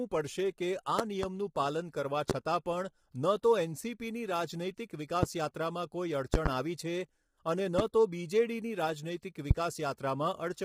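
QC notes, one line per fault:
Throughout: low-delay AAC compression, heavy. The speech is rough and grainy, with noise filling the gaps between harmonics and a thin, synthetic top band. This is likely an AAC-ELD stream at a low rate, around 24 kbps. On a spectrogram, the harmonics look smeared and the upper band appears blocky and patchy.
0.99–1.26, 2.30–2.33, 5.23–5.26, 6.34–6.49, 7.79–7.82, 9.51–9.54: loud pop. These are sharp pops, doubled in the first and fourth spans, sitting about 20 dB above the speech (about 15 dB at 7.79). The speech continues underneath. The likely cause is a voltage spike from a switch, static or glitch. The waveform shows tall narrow spikes, and the spectrogram shows full-band vertical lines.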